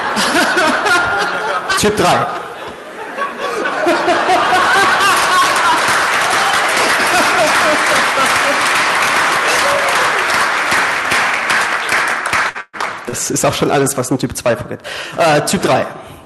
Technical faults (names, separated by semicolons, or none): burst of packet loss; short concealed packet loss; lost packet rebuilt from error correction